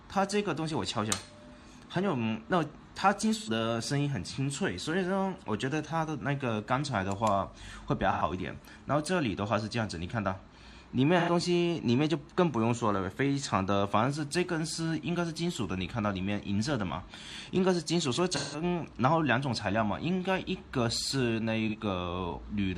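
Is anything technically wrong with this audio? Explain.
Yes, there is AAC frame loss with concealment, at 3.37–3.49 s, 8.12–8.22 s, 11.19–11.30 s, 18.35–18.64 s and 21.68–21.76 s. Chunks of the compressed stream never reached the decoder, so it rebuilt the missing stretches from the last good spectrum. The gaps measure about 85 ms, 85 ms, 85 ms, 171 ms and 43 ms, which fits whole AAC frames of roughly 43 ms dropping out. Each patch sounds smeared, noisy or phasey. The longest, near 18.4 s, covers four lost frames.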